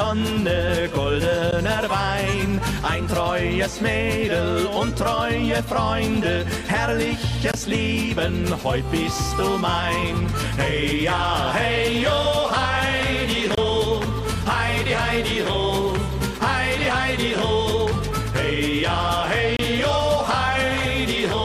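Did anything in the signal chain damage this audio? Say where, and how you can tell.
Yes. At the playback stage, segment timestamps fail to butt together, leaving a gap between stream segments that the player pads with silence. Hard-edged holes recur every 6 s, at 1.51 s, 7.52–7.54 s, 13.55–13.58 s and 19.57–19.59 s, lasting 13 to 27 ms, with no audio lost.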